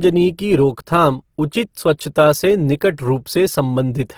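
From start to end the speech carries plainly audible Opus compression as its likely cause: consonants and vowels sound grainy, rough and noisy rather than swirly. The damage fits a low bitrate of roughly 16 kbps in the music-oriented CELT mode, where the encoder keeps each band's energy but fills starved bands with folded or noise-like content. A spectrogram would show full bandwidth up to about 20.4 kHz, with few holes but smeared, noisy texture replacing clean harmonics.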